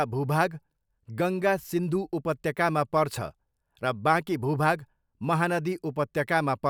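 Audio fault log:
Nothing here stands out as a fault, so there's nothing to log for this speech clip.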